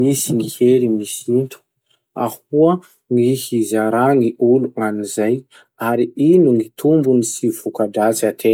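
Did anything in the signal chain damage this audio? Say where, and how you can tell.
No, no signal-chain damage.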